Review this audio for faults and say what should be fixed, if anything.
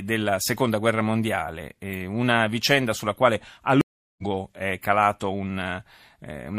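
A stream reconnect interrupts the speech from 3.81 s to 4.24 s. The audio drops out for 368 ms, then resumes at a later point, with roughly a fifth of a second of the stream skipped past rather than replayed. That pattern points to the connection breaking, the player reconnecting to a live feed, and a fresh decoder picking up wherever the stream had moved on to. To prevent it, enlarge the client's network buffer and use automatic reconnection with resume so short outages are covered without loss.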